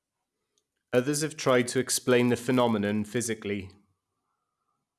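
A steady buzz at 100 Hz rides under the speech from start to finish. It rises and falls with the talker and drops away in the pauses. It comes from a resampler restarted on every block. The conversion from 48 kHz down to 24 kHz was run on each 10 ms block in isolation, so the filter at every block edge lacked the true neighbouring samples and left a small error there. A hundred such ticks per second fuse into the buzz.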